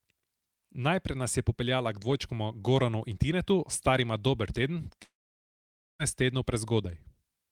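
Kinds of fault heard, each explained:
Long network dropout: from 5.03 to 6.02 s the speech breaks off. The last sound stretches into a short fading buzz, then about 0.89 s of silence follows. Speech resumes with 0.96 s missing, likely because no audio reached the receiver for that stretch.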